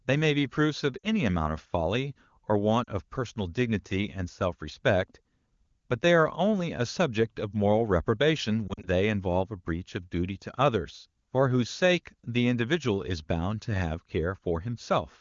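At 0.98 to 1.07 s, 2.83 to 2.89 s and 8.68 to 8.88 s, lost AMR speech frames briefly dip the speech toward near silence as the decoder stretches earlier pitch at fading gain. The waveform shows short envelope sags, and the spectrogram shows smeared, repeated harmonics.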